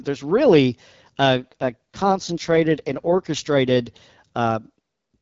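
Speech here, carried over an AMR wideband link. From 1.36 to 3.27 s there's an AMR rate drop: the voice goes rough and raspy with no gap or loss of bandwidth, which fits the codec stepping down from around 12.65 to 6.6 kbit/s, then recovering.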